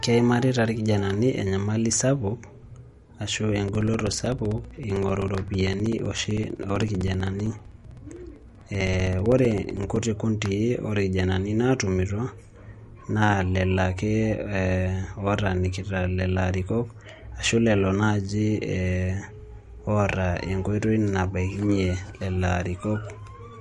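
From start to finish the speech sounds watery and swirly, with treble cut off sharply near 11.2 kHz, likely MP3 compression at a low bitrate; a spectrogram shows a hard ceiling and flickering holes. From 3.68 to 10.03 s, periodic USB or driver dropouts blank roughly 4 ms every 64 ms, about a hundred regular ticks, visible as evenly spaced gaps in the waveform.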